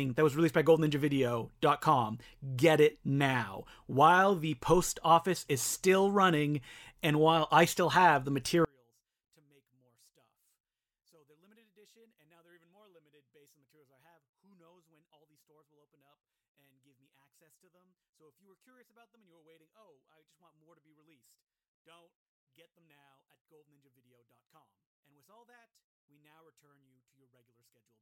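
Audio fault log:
8.65–28.01 s, one channel inverted: right after "I still have the", the speech collapses to a faint remnant, about 40 dB quieter, and stays there to the end. The likely cause is one stereo channel flipped in polarity. When the two channels are combined to mono, the speech common to both cancels almost completely, leaving only the small difference between them.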